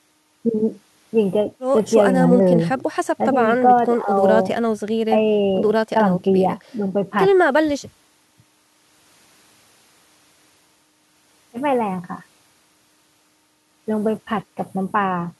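Nothing is technically wrong with this speech recording.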